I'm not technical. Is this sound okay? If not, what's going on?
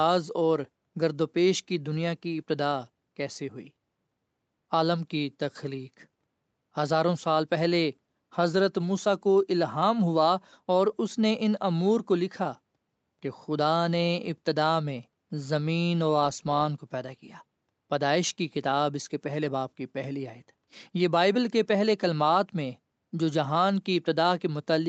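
Yes, the speech is fine: it has the normal sound of a call, which passes nothing above 8 kHz, and there are no faults.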